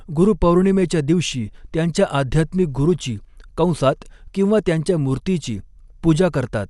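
Throughout the speech the top end stops near 11.4 kHz and the sound is dull, with a rough, fluttering noise around tones. This is likely Dolby Digital compression at a low rate, which fits a 64 kbps stream: bandwidth is cut and starved frequency lines are filled with noise.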